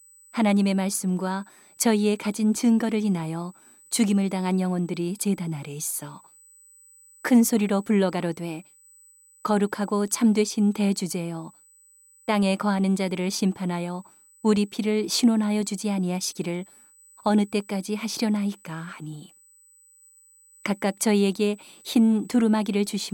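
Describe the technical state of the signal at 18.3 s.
At 18.3 s the speech carries USB whine, a steady fixed-pitch tone at 8 kHz that runs through the whole clip rather than appearing at this moment alone. It sits roughly 30 dB below the speech, audible as a thin, high whistle. The 8 kHz pitch points to the bus's 125-microsecond microframes: current drawn at that rate leaks through the shared power or ground into the audio path.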